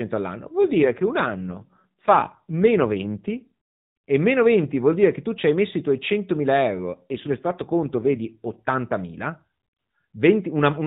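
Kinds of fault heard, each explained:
AMR rate drop: From 0.62 to 3.52 s and again from 6.94 to 8.57 s the speech turns rougher, buzzier and more synthetic, with no gap and no change in bandwidth, then clears as the rate recovers. The mobile speech codec has been told to spend fewer bits describing the voice and more protecting them over a weak radio link. The coarser sound fits a step down from 12.2 to 5.9 kbps.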